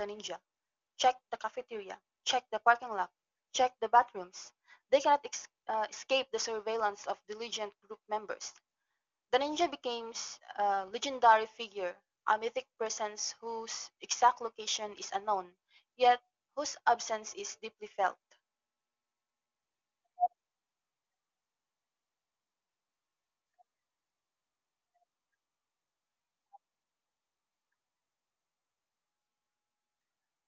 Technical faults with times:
none

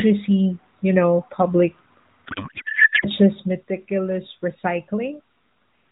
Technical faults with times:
2.26-3.06 codec payload misread

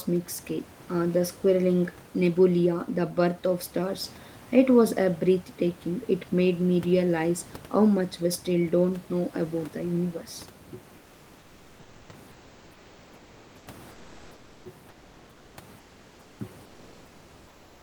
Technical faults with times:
10.97-16.39 comfort noise in place of the background
16.65-17.82 comfort noise in place of the background

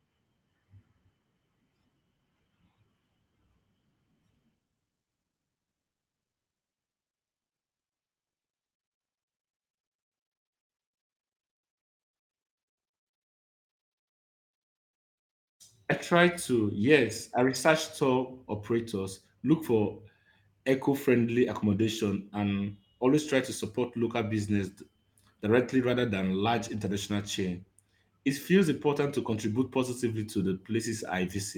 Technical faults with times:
none

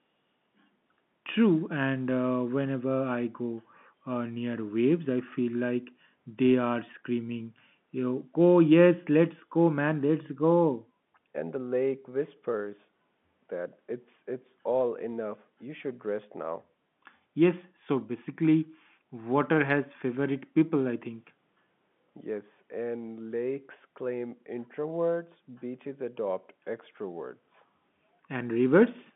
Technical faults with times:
none

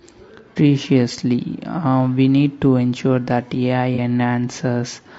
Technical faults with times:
0.00-5.19 low-delay AAC compression
0.53-0.57 AAC frame loss with concealment
3.95-3.99 AAC frame loss with concealment

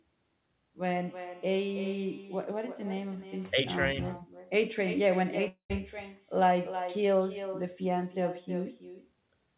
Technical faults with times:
0.00-9.57 echo with no canceller
0.86-1.94 GSM phone buzz
5.48-5.72 long network dropout

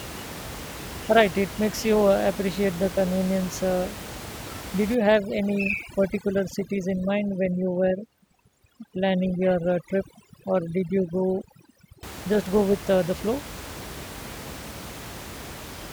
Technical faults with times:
4.95-12.03 overdone noise removal

